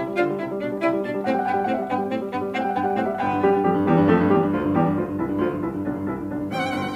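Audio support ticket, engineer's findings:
Listened to the whole music clip and found nothing to flag, so no issues to report on this one.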